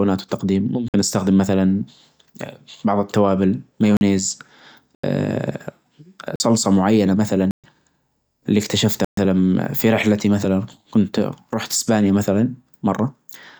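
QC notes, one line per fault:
0.88–0.94 s: block of digital silence. A short hole of 54 ms, as the audio drops abruptly to zero and returns with no fade.
3.97–4.01 s: block of digital silence. A 43 ms dropout. The length fits one 2048-sample buffer at 48 kHz left unfilled in time.
4.95–5.04 s: block of digital silence. A longer 85 ms hole, consistent with two missed 2048-sample buffers being output as zeros.
6.36–6.40 s: block of digital silence. Another 43 ms gap. Its length again fits a single 2048-sample buffer replaced by zeros.
7.51–7.64 s: block of digital silence. An audible 128 ms hole in the speech, where the signal cuts to zero and back.
9.05–9.17 s: block of digital silence. A second 128 ms dropout, where the output went to zero instead of carrying the audio.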